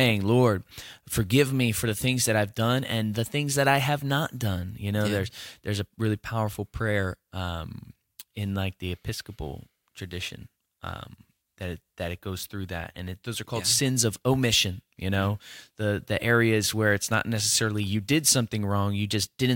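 From 9.75 s to 12.18 s, just before "goes through that and", crude rate conversion adds a gritty, inharmonic fizz. It fits a 48 kHz to 44.1 kHz change made by picking nearest samples, unfiltered. Well below the speech, it tracks loud, bright syllables, buzzing rather than swirling like codec artefacts.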